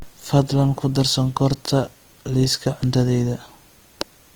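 From start to finish the speech sounds grainy and rough, with a noisy, sandy texture in place of clean harmonic detail, while the top end stays open rather than muffled, reaching up to about 20.2 kHz. This is Opus compression, likely in its CELT music mode at a bitrate near 24 kbps. The encoder keeps each band's overall energy but, short of bits, fills fine detail with folded or noise-like content, which produces this plainly audible graininess.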